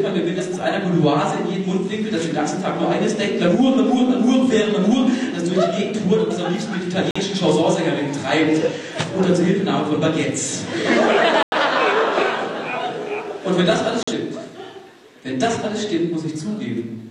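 At 7.11 to 7.20 s, 11.43 to 11.57 s and 14.03 to 14.13 s, a corrupt frame muted leaves abrupt silent holes where damaged compressed frames were rejected and replaced with silence; the longer middle gap fits two frame lengths. Unlike a skip, no audio is lost from the timeline.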